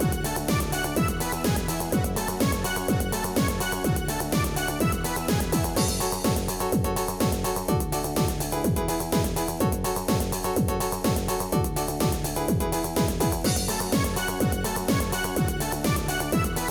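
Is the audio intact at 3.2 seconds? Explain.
Yes, at 3.2 seconds the audio plays through cleanly, with no dropout, click, distortion or other break in the sound.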